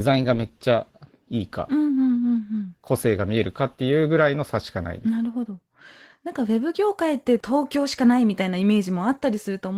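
Speech throughout carries Opus voice compression with plainly audible damage: a hoarse, slightly robotic texture from coarse excitation coding, with content kept above 8 kHz that points to hybrid mode near 16 kbps. Unlike a simple low-pass filter, the highs are coarsened, not removed.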